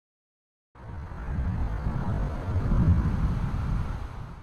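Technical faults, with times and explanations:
0.00–3.08 s, time-stretched section: the sound drags at about 0.6 times its normal pace while its pitch stays unchanged, then the pace jumps back at 3.08 s. Likely cause: software lengthened this stretch by repeating short fragments.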